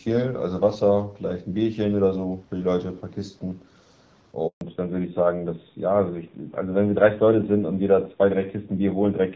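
A handover gap at 4.47 to 4.61 s silences the speech for 140 ms as the call switches networks: the sound dies away quickly, no speech frames arrive, and whatever was said then is lost. A fallback to narrowband follows from 4.61 s to the end. The clear HD Voice sound of the first half, which fits AMR-WB at around 12.65 kbit/s, gives way to a duller, rougher band with nothing above 4 kHz, consistent with AMR-NB at about 7.4 kbit/s.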